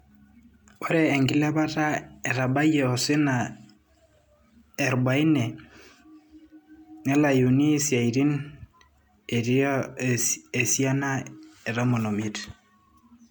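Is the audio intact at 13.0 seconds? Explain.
No. At 13.0 s, as throughout, the speech shows generation loss, likely from roughly four MP3 encodes at 128 kbit/s. Each pass quantises on a shifted frame grid, so the sound is swirly and hollow with blurred attacks. A spectrogram shows smeared onsets and patchy holes below 20.1 kHz.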